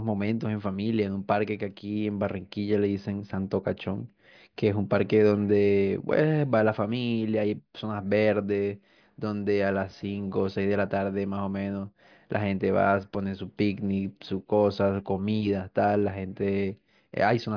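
No technical faults can be heard anywhere in the speech recording.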